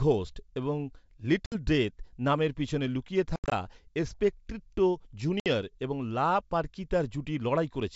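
At 1.46 to 1.55 s, 3.36 to 3.69 s and 5.40 to 5.47 s there is packet loss on an ADPCM call. This is G.722 wideband telephone coding, clear up to 7 kHz. Each gap is hard-edged silence: 60 ms twice, and in the middle 120 ms scattered over 160 ms, with a longest run of 80 ms. The decoder's adaptive predictor and step size drift from the sender's, so the speech returns with brief, slight distortion.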